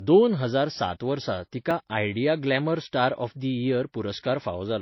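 Across the whole speech clip, the audio was likely passed through two lossy codecs in turn, a case of transcoding between lossy codecs. The sound fits a low-rate MP3 stage near 28 kbit/s followed by HE-AAC around 32 kbit/s. The second encoder spent bits re-coding the first encoder's artefacts and added its own, so both kinds of artefact are heard together.

At 1.71 s, just after "दोन हजार सात वर्सा", a dropped buffer (overrun) occurs. The program likely fell behind and the hardware overwrote a few milliseconds of samples before they were read. The two sides are joined with no gap, producing a small jump in the speech.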